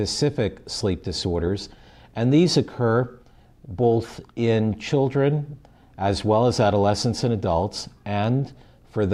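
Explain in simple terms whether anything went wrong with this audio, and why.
Nothing went wrong with this recording; there are no technical faults anywhere in it. The sound runs steadily from beginning to end without any breaks, jumps or glitches.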